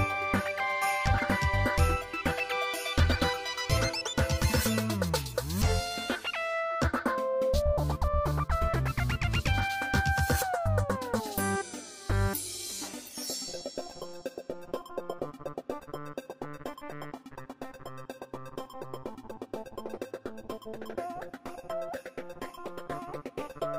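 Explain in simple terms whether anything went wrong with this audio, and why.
Nothing went wrong here: the recording shows no technical fault at any point, so the sound reaches you just as it was captured.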